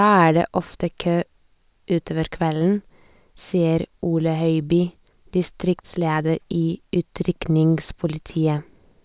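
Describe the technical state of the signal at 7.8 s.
The signal at 7.8 s is intact, with no fault at that point in the speech.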